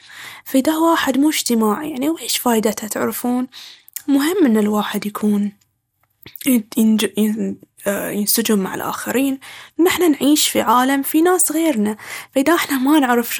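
Plainly audible lossy coding, likely MP2 compression at a rate that fits about 80 kbps, starves the upper sub-bands of bits throughout the speech. Nothing sounds above 17.4 kHz, the remaining bands flicker and are coarsely quantised, giving a dull, gurgling, granular distortion.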